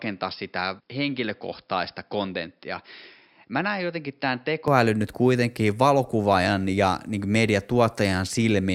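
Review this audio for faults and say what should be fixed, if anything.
From 0.0 to 4.68 s the speech is dull and boxy, with nothing above 5.3 kHz, about 5 dB quieter, and carrying its own faint noise floor roughly 50 dB down. At 4.68 s it opens up cleanly with no gap. This is likely an input switched to a poorer device, a narrower microphone path later replaced. Unlike a simple low-pass filter or codec bandwidth drop, the level and background change together with the tone. Lock the recording input to one device before capture starts.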